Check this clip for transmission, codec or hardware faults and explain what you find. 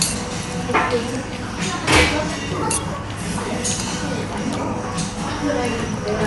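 One codec fault runs through the whole clip of sounds. Throughout, it is dull, with nothing above 11.4 kHz and rough, fluttering noise around tonal parts, likely from low-bitrate Dolby Digital compression, consistent with roughly 64 kbps, where starved frequency lines get dither fill.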